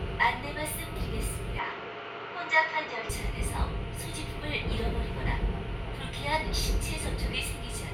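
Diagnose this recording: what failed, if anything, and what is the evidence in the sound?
From 1.59 to 3.09 s the sound turns duller, with nothing above 7.6 kHz, then clears; this is likely an input switched to a poorer device at the driver stage.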